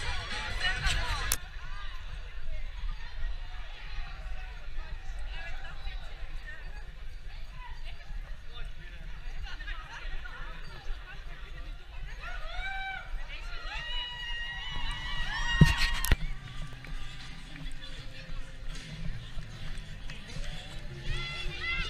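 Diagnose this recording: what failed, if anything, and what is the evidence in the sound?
The failure is in the driver or buffer stage: processor overload crackle. For a brief stretch from 16.73 to 16.87 s, the processor could not fill its very small audio buffers on time, each well under a millisecond long. A handful of deadlines slipped in a row. Each missed buffer went out as a sliver of silence with hard edges, so the sound is cut by a quick cluster of clicks heard as a short gritty crackle that stops once the load eases.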